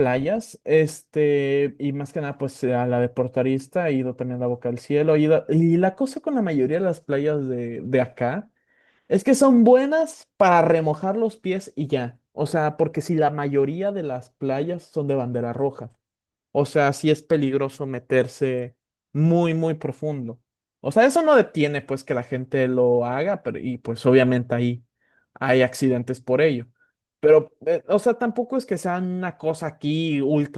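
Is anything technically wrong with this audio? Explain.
No, nothing technically wrong can be heard here.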